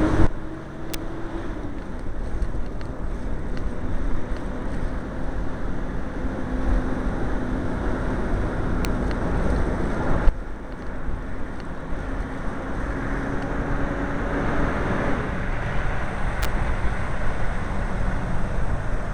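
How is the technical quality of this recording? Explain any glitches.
The recording is marred by three electrical switching spikes: sharp snaps at 0.94 s, 8.85 s, and 16.42 to 16.45 s. Each is likely a nearby switch or static discharge arcing into the audio line. It lands on top of the sound and peaks at around -5 dBFS for the first two and -10 dBFS for the last. Waveforms show thin vertical spikes, and spectrograms show narrow bright columns spanning all frequencies.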